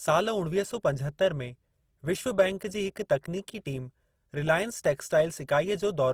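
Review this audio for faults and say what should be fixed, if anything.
Throughout the speech there is plainly audible codec damage: tones and upper harmonics sound grainy and rough, with a noisy texture where detail should be, yet the band stays full, reaching about 20.4 kHz. This is likely Opus compression in its CELT music mode, which preserves each band's energy but fills starved bands with folded or noise content, consistent with a low rate around 24 kbps. To prevent it, encode at a higher Opus bitrate or keep an uncompressed master for delivery.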